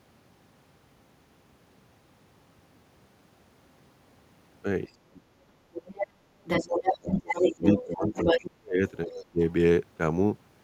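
From 4.87 to 5.42 s the speech sinks by roughly 30 dB, then does so again from 6.02 to 6.31 s, across a long stretch from 6.6 to 8.82 s (dropping around 25 dB), and from 9.06 to 9.41 s (about 20 dB). This is speech suppressed in double talk. The likely cause is an echo canceller that, with both sides talking, could not separate the local talker from loudspeaker echo and turned everything down.

Alongside these, the other side's voice leaks through. A quieter scrap comes at 5.73 to 6.06 s, followed by stretches as loud as the talker from 6.44 to 7.83 s and 8.09 to 8.5 s, and a faint trace at 9.07 to 9.15 s. Far-end audio played on the loudspeaker was likely not fully removed from the microphone signal.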